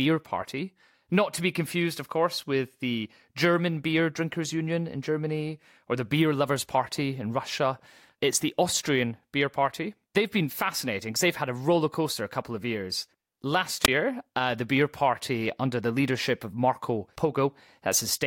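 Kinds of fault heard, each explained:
Wireless microphone squelch dropout: the FM radio link from the transmitter weakens far enough that the receiver's squelch gate shuts the output rather than pass raw static. In this speech clip it happens between 13.83 and 13.88 s, as a brief surge of hiss leading into a hole of near silence about 18 ms long, after which the receiver reopens and the speech carries on.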